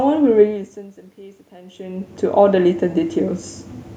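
Speech recorded with audible room noise. From 1.16 to 3.45 s, automatic gain rising is heard. The input level falls by about 22 dB, partly as the talker moves away from the microphone around 1.5 s. The gain control responds by slowly adding about 5 dB. Voice and room noise swell together over those two seconds.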